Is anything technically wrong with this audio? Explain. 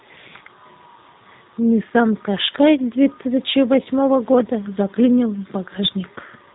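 Yes. Throughout the speech, the audio has passed through a G.729 codec, and the damage is plainly audible. The sound points to an 8 kbit/s G.729A stream: instead of keeping the waveform, the encoder keeps a vocal tract filter, a pitch predictor and a handful of pulses for each short frame, and the decoder rebuilds speech from those. Nothing above 3.9 kHz survives, so the speech sounds muffled, slightly rough and synthetic.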